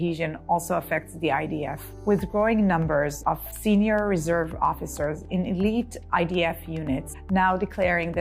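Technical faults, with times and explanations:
Nothing wrong turns up here; it's a fault-free clip with nothing to flag.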